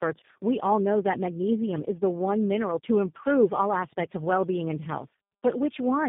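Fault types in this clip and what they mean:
Tandem speech coding: the speech was decoded and re-encoded through three speech codecs in turn, G.726, AMR-NB and G.729A, each working on the last one's damage, so it sounds rougher and more warbly than one low-bitrate codec alone, with nothing above 3.7 kHz.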